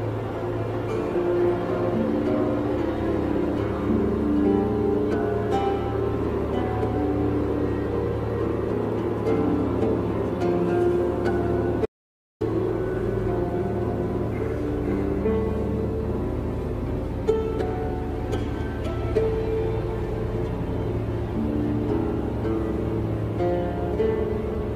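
An audio dropout to silence runs from 11.86 to 12.41 s. For 0.55 s the signal falls to silence, with no room tone, then resumes mid-flow. This is likely a lost input that the recorder kept filling with silence, so that stretch of sound is gone.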